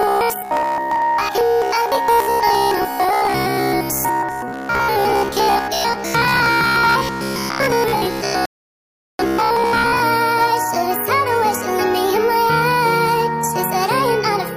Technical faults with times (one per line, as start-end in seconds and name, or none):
0.01-10.01 robotic sound from repeated short buffers
8.46-9.19 rebuffering stall